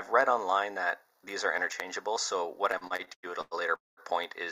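From 2.71 to 3.54 s, packets reached the receiver more slowly than the audio was being played, so its jitter buffer kept running dry. That produced repeated stalls (stutter): seven short gaps, the longest about 102 ms, were each filled by extending the last sound. Together they add roughly 316 ms and cover about 38% of that stretch, so the audio drags and hiccups while nothing is actually lost. Shortly after, from 3.75 to 4.0 s, there is a call audio freeze, likely caused by packets held up in transit that emptied the buffer again. The receiver carried the last sound forward briefly and then fell into about 180 ms of silence, inserting roughly 219 ms in total. When the packets arrived, playback resumed where it had stopped, running about 219 ms later than before with no content missing.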